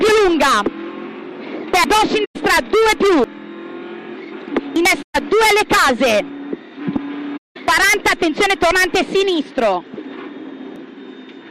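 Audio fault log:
1.84 s, 3.24 s, 4.76 s, 7.68 s, 8.72 s, 10.76 s, dropped buffer (overrun): at each point the sound jumps straight ahead with no gap of silence, as if a short piece were cut out and the ends spliced together. About 100 ms goes missing at 1.84 s, about 70 ms at 3.24 s, and about 40 ms at each of the other four. The likely cause is the capture side failing to read its buffers in time, so the hardware overwrote them and those stretches never reached the recording.
2.25–2.36 s, 5.02–5.16 s, 7.37–7.57 s, AAC frame loss with muting: the sound fades down into a hole and fades back up, with soft edges rather than an abrupt cut. The holes last 107 ms, 128 ms and 192 ms, the longest at 7.37 s. The decoder received no data for these stretches and filled them with zeroed spectrum. Its overlapping windows then blend the good frames on either side into the silence, which produces the gradual fade at each edge.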